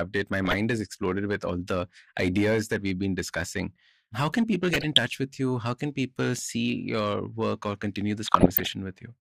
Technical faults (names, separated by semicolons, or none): hard clipping; DAB burbling